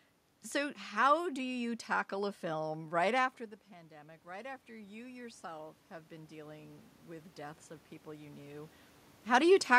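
From 3.89 s to 7.37 s the automatic gain control responds to the input having fallen by about 16 dB, around the time the talker moves away from the microphone at roughly 3 s, and slowly raises its gain by about 8 dB. Because the boost acts on the whole signal, the speech and the room noise swell up together over those three and a half seconds, a gradual lift in level rather than a sudden jump.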